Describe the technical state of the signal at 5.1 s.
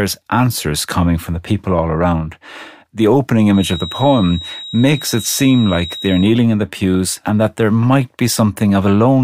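At 5.1 s the speech carries a feedback whistle that runs from 3.48 s to 6.37 s. It is a thin, steady tone at 3.8 kHz, sitting well beneath the speech, roughly 15 dB down, slowly swelling and fading in level. The likely cause is a loudspeaker-to-microphone loop held just at the edge of instability, so one high frequency keeps ringing without building into a runaway howl.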